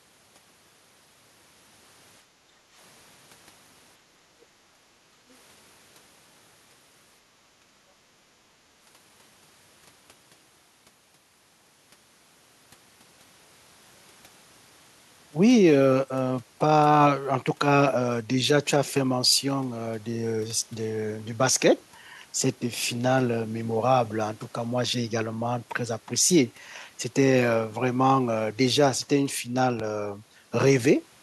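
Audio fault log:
2.23–2.76 s, 4.60–5.24 s and 7.60–7.72 s: background gated by the echo canceller. The room tone sinks by about 9, 8 and 14 dB, for roughly half a second twice and then a brief tenth. The canceller clamps the mic while the far end plays, then releases.
4.41–4.45 s and 5.30–5.34 s: other side's voice leaking through. Two tiny scraps of a second voice, very faint and far below the talker. These are likely far-end audio from the loudspeaker that the echo canceller didn't fully strip from the mic.
29.80–29.82 s: loud pop. A single sharp pop lands a few dB above the sound, which keeps going underneath. It's likely a sudden voltage step from a plug, a switch or a driver glitch, shaped by the circuitry that follows it.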